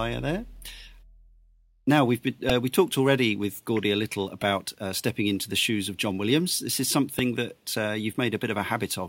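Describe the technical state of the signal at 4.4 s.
Right at 4.42 s, between "a little" and "uh stepping into the", there's a repeated buffer. New audio didn't reach the output in time, so the device played its last chunk of about 1.45 ms again, four extra times in a row, which fits a 64-sample buffer. With pieces that tiny, you hear a quick click or brief buzz rather than a proper stutter, and nothing seems to drop out of the speech around it.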